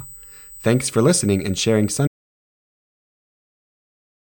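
An audio dropout to silence begins at 2.07 s, right after "for listening and sharing", and runs to the end of this speech clip. The sound stops mid-flow and is replaced by silence with no room tone at all, so whatever followed is simply missing. The likely cause is a lost input, such as a disconnected device, a failed link or an accidental mute, while the recorder kept writing silence. Under the speech sits USB whine for as long as the audio lasts: a fixed, high-pitched tone at 8 kHz, strongest at its harmonic of 16 kHz, roughly 25 dB below the speech. That pitch matches the 125-microsecond microframe rate of a USB bus, whose pulsing current draw is leaking into the analogue path through shared power or ground wiring.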